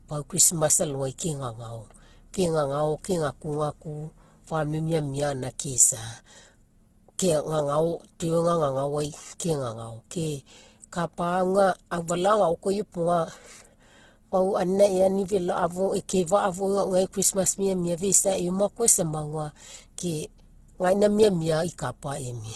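A speech clip with the same fault from start to finish. Nothing is present above 12.2 kHz. The coarse detail fits a very low-bitrate first encoding. This is likely low-bitrate audio saved at a high bitrate. The later high-bitrate MP3 cannot restore what was removed.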